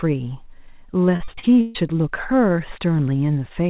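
It's a speech clip with a burst of repeated packet loss (robotic sound) from 1.16 to 1.77 s: six gaps, the longest about 139 ms, patched by stretching the last sound, so nearly half that stretch turns choppy, over audio band-limited to 4 kHz by the call path.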